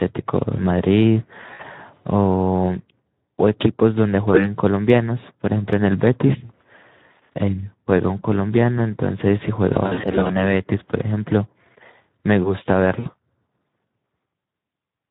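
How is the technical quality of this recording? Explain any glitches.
The quality is pretty rough. This is Speex-coded speech with some packet-loss glitches on top.

The Speex codec damage runs the whole way through. It sounds hoarse and noisy, which fits a low setting of around 11 kbps. The CELP coder gets too few bits for the excitation, so the voice's fine structure turns grainy.

There are four spots of VoIP packet loss concealed by the speech codec: 1.53 to 1.63 s, 6.45 to 6.52 s, 9.73 to 10.39 s, and 12.99 to 13.10 s. When packets went missing, the decoder kept repeating its last pitch and filter at falling gain. That gives a brief buzzy or noisy smear that fades out, and the voice stays weak for a moment after packets return. The 9.73 s stretch is the worst. It sounds like short dropouts of about 40 ms or less scattered across roughly half a second.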